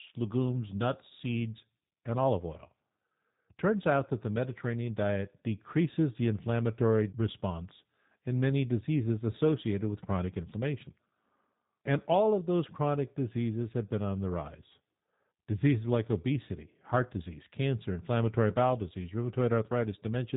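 From start to finish the speech carries the sound of a G.729 codec, and the damage is plainly audible. The encoder discards the natural waveform and rebuilds each 10 ms frame from a vocal tract filter, a pitch predictor and a few pulses, which fits an 8 kbit/s budget. The result is intelligible but rough and slightly synthetic. On a spectrogram, energy stops sharply at 3.8 kHz, and harmonics look smeared and grainy.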